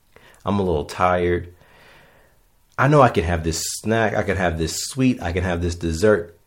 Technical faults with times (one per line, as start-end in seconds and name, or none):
none